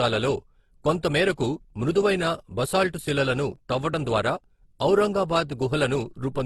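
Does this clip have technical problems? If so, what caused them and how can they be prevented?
Yes. Across the whole clip the speech carries two layers of codec smear at once, likely from transcoding between lossy codecs: what sounds like a low-rate Opus encode, around 16 kbit/s, re-encoded as HE-AAC near 40 kbit/s. The second pass spends bits on the first pass's artefacts, and nothing survives above 18.2 kHz. To prevent it, encode once from the original uncompressed source.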